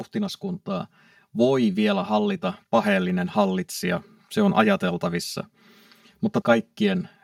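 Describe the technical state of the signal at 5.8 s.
At 5.8 s, as throughout the speech, one channel runs late by around 5 ms before the two are summed to mono. This channel delay causes comb filtering: the shared content cancels at evenly spaced notches starting near 100 Hz, leaving the voice hollow and phasey.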